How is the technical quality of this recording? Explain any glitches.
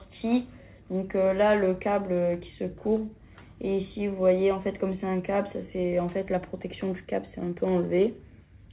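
No glitches are audible: the audio carries nothing above 4 kHz, which fits a narrowband call path such as G.711 mu-law, and nothing else in it stands out as a fault.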